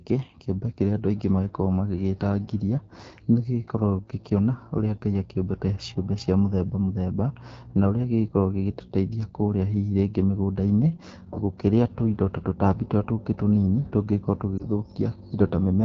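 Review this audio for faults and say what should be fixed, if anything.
The whole recording ran through the AMR wideband (HD Voice) codec at 8.85 kbit/s, one of its lowest rates, so the pulse-driven vocal tract model leaves the speech plainly rough and raspy throughout. Preventing this means negotiating 12.65 kbit/s or higher for the call.

Between 14.58 and 14.64 s, a corrupted radio frame failed its checksum, which fits a single lost AMR speech frame, and the decoder repeated its last pitch and vocal tract settings at falling gain, causing a brief dip or warble. Preventing this means improving radio coverage or adding error protection so frames arrive intact.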